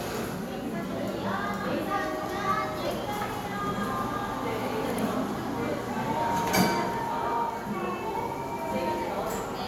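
No audible technical faults anywhere in the audio: level, continuity and timing all hold steady throughout.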